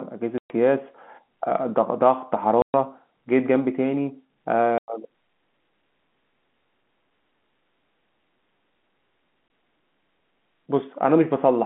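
Speech heard over a telephone-band line that cuts out abruptly four times, each gap a hard-edged hole of dead silence: 0.38 to 0.50 s and 2.62 to 2.74 s (120 ms each), 4.78 to 4.88 s (100 ms), and a brief 20 ms dropout at 9.48 to 9.50 s. This is packet loss filled with silence. Lost packets were replaced with nothing, and the gap lengths, all multiples of 20 ms, fit 20 ms packets.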